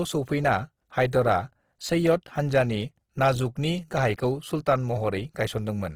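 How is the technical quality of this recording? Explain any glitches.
The technical quality is poor. Codec damage is plainly audible throughout, and one brief smear occurs near the start.

Throughout the recording, the speech sounds rough and grainy. Tonal parts of the voice turn noisy instead of clean. The top end is still present, so the sound is not muffled. The likely cause is Opus compression in its music mode at a low bitrate, around 16 kbps. Short of bits, the encoder keeps each band's energy but fills the detail with noise or copied lower bands. That produces the grit.

At 1.11 s there is a pre-echo. A short hiss arrives just ahead of a sharp attack and blurs its onset. The codec spreads quantisation noise across a whole block. The attack sits late in that block, so noise scaled for the loud moment leaks into the quiet one before it. The hiss lasts about 18 ms.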